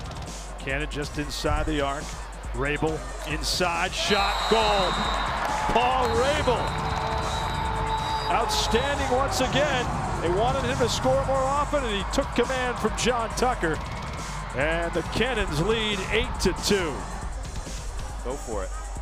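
From 1.26 s to 7.43 s a video or display buzz sits under the audio: a 59.94 Hz field-rate buzz with hash above it, plus a thin line-rate whine near 15.7 kHz, low in level, as a screen or video cable couples into the signal path.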